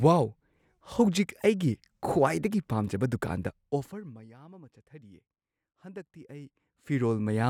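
From 3.43 to 4.31 s the speech is pulled down by roughly 25 dB with zipper noise: the gain moves in discrete steps, around a hundred per second, without smoothing, so each jump leaves a small click and the fade carries an audible ticking buzz.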